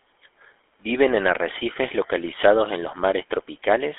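From start to finish the speech passes through the GSM full-rate codec, which fits a 13 kbps phone link: a vocal-tract model driven by sparse, regularly spaced pulses gives a plainly buzzy, gravelly roughness. A spectrogram shows energy confined between 300 Hz and 3.5 kHz.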